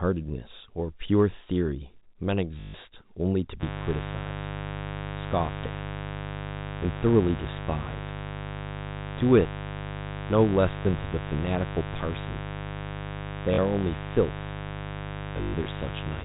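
A speech recording on a G.711 telephone path, band-limited below 4 kHz, with two faults. The network dropped packets and the receiver replayed the last one, causing robotic stutters at 2.6–2.74 s, 8.59 s, 13.54–13.58 s and across 15.35–15.66 s, where the longest run is 120 ms. The lengths fit 20 ms packets. From 3.59 s to the end, a mains buzz leaks in at 50 Hz, likely from a dimmer, rectifier or missing shield, adding a steady, raspy buzz roughly 10 dB below the speech.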